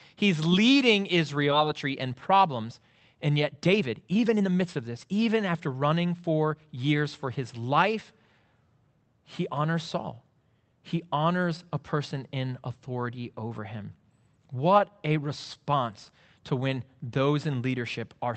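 At about 1.51 s there's a skip ahead. Roughly a second and a half of the speech just isn't there, and the audio on either side is butted together with no gap at all. What fits is a chunk being dropped, either lost in transit or thrown out when the jitter buffer overflowed while later audio was already queued. You get an abrupt jump in the flow, as if someone cut the tape and spliced it straight.

Right after that, from 1.65 s to 6.84 s, there's a jitter buffer speed-up running at about 118% until "for his life". The buffer had built up more audio than it wants, the sort of pile-up you'd get after delayed packets land together. To claw that back, the receiver kept shaving out tiny slices a pitch period or so long, trimming roughly a second over the stretch. Pitch stays put but the talker sounds rushed. Underneath it all is the Opus call path, with its usual coding texture and top end capped around 8 kHz, consistent with a 32 kbps setting.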